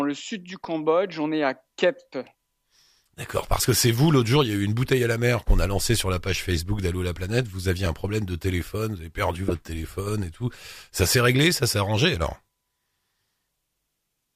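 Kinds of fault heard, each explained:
Corrupt frame decoded: Damaged compressed frames were played as if they were intact, so misread values put energy at the wrong frequencies for about the length of each damaged frame. In this speech clip there are four short chirps or noise bursts, at 3.42 to 3.46 s, at 7.85 s, at 9.48 to 9.54 s and at 11.03 to 11.07 s. Each lasts roughly one to three frames. The loudest, near 9.5 s, peaks around -10 dBFS. The first is the quietest, around -25 dBFS.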